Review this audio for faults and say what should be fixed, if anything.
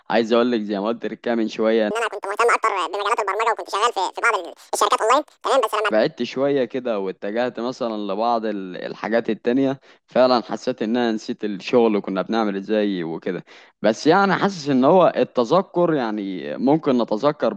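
From 1.91 s to 5.91 s there is a wrong sample rate fault. The speech runs at twice normal speed and a full octave (12 semitones) high, which fits audio recorded near 22 kHz being played at 44.1 kHz with no conversion. On a spectrogram, harmonics and formants sit at double their usual frequencies with doubled spacing. On the waveform, syllable envelopes look squeezed to half their length. Prevent this by reading the source rate from the file and resampling to the device rate before playback.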